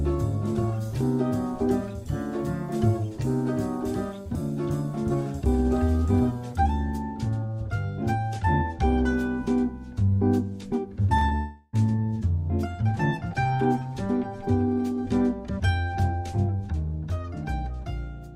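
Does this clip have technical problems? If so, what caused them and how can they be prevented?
Yes. Short concealed packet loss occurs at 11.17 to 11.23 s and 11.29 to 11.33 s, where 40 ms and then 20 ms of audio arrived too late for the decoder. The receiver patched each gap by extending the preceding sound and blending back, heard as brief smears. A larger jitter buffer or forward error correction would prevent this.

From 11.35 to 11.75 s the audio becomes a synthetic continuation that fades, about 0.38 s with no real audio and no silence, after which the sound resumes with that section missing. The likely cause is a long network dropout, with the receiver concealing the entire gap. A more stable connection, such as wired rather than congested wireless, would prevent it.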